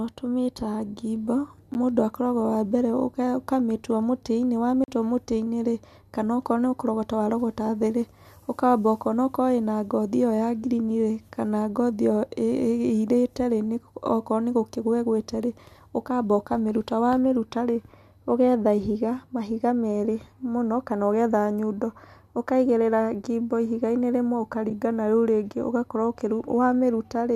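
Block of digital silence at 1.74 s and again from 4.84 to 4.88 s: in this speech recording the sound drops abruptly to silence and returns with no fade, so the 10 ms gap is heard as a tick and the 40 ms one as a short hole. That fits the output buffer not being filled in time. AAC frame loss with muting at 24.70 s: about 10 ms of audio is missing, but the overlapping transform windows taper the sound out and back in, leaving a soft-edged dip, consistent with the decoder zeroing a lost frame's spectrum. The short frame length and the light coding texture heard throughout point to a low-delay AAC stream, likely AAC-ELD at a moderate bitrate in the region of 64 kbps.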